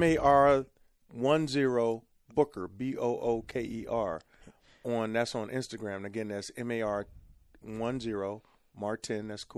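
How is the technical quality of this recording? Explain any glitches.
The recording has plainly audible coding damage across its whole length, plus one brief glitch in the middle.

Throughout the speech, the high end sounds watery and swirly, with chirpy, metallic edges on s sounds and softened consonant attacks. This is likely MP3 compression at a low bitrate, around 64 kbps. Short of bits, the encoder zeroes weaker frequency lines, which flicker on and off between frames.

From 3.51 to 3.53 s there is a short blip, a sign of damaged data in a compressed stream. Some bytes were corrupted, so the decoder misread the frame there and lost sync until it found the next valid header. The result is a brief glitch in the audio.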